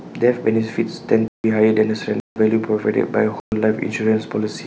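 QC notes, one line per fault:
1.28 to 1.44 s, 2.20 to 2.36 s and 3.40 to 3.52 s, block of digital silence: the speech drops to silence for 160, 160 and 120 ms, cutting out and back abruptly with no fade.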